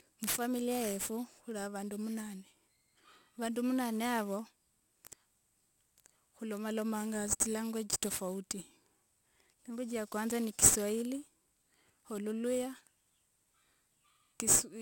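Speech with aliasing throughout: sibilants sound gritty and metallic because content above 16 kHz has folded back into the audible band as unrelated tones, which points to a 48 kHz to 32 kHz conversion with no anti-alias filter. The spectrum runs hard up to the 16 kHz edge, where a cleanly band-limited clip would fall away smoothly before it. These folded components sit only about 10 dB below the signal.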